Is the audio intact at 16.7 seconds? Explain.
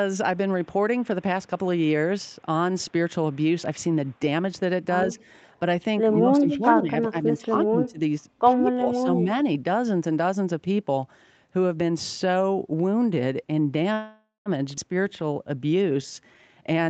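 No. At 16.60 to 16.89 s the jitter buffer had built up more audio than its target, so it performed a jitter buffer speed-up, cutting pitch-period-sized pieces (about a tenth of a second in total). The speech plays at 134% speed with unchanged pitch and sounds hurried.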